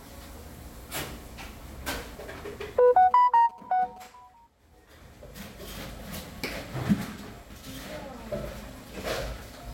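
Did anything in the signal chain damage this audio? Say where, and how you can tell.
Yes. From 2.88 to 4.07 s there are GSM signalling bursts, picked up in the analogue wiring ahead of the converter: a galloping dit-dit-dit of short buzzes repeating at about 217 Hz, sitting roughly 25 dB below the main sound. A 2G phone nearby was exchanging brief radio bursts with the network, and some part of the analogue circuit rectified that radio energy into audible audio. Ordinary mains hum would be a continuous tone at 50 or 60 Hz. This interference comes in clustered groups and stops on its own.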